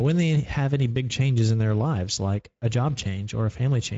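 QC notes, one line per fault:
Throughout, Speex codec: speech sounds noisy and hoarse with plainly audible coding damage, the CELP excitation starved of bits; nothing above 7.7 kHz, which fits a wideband mode near 16.8 kbps.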